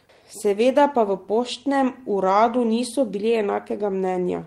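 No technical faults are audible anywhere in the recording.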